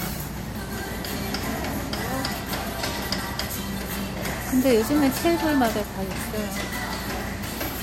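Throughout, the audio is dull at the top, with nothing above about 16.5 kHz and the artefacts of the earlier encode still present. This likely comes from low-bitrate audio saved at a high bitrate: damage from an MP3 encode near 60 kbit/s, which a later high-rate MP3 pass cannot undo.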